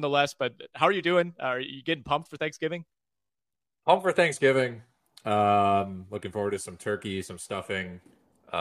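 No technical faults can be heard anywhere in the speech.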